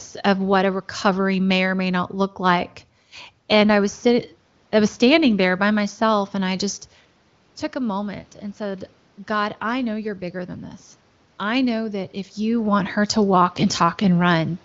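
Automatic gain rising, 7.78 to 10.62 s: the gain control slowly adds about 3 dB after the input falls, so voice and room noise swell together before "this I know that".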